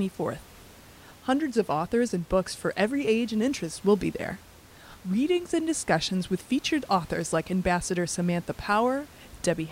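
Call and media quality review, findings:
No faults found in the speech path; the only background is room noise at the microphone, about 25 dB below the speech, which is part of the recording.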